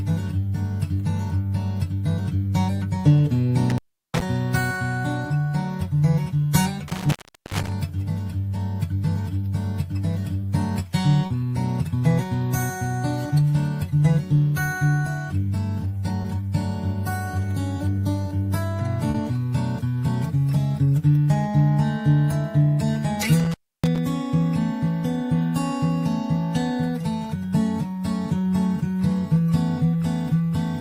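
Around 3.70 to 4.22 s and again at 6.88 to 7.72 s there's intermittent contact: a loose connection opens, so the sound drops out for roughly 0.36 and 0.4 s, crackling at the edges with faint hiss underneath. Then come short concealed packet losses at 11.26 s (40 ms), 16.22 s (20 ms), 18.21 s (10 ms) and 19.10 s (40 ms). Those bits never arrived, so the receiver stretched the preceding sound over the gap, giving brief smears or wobbles. At 23.40 to 23.98 s the contact opens once more, cutting out for about 0.3 s with the same crackly edges.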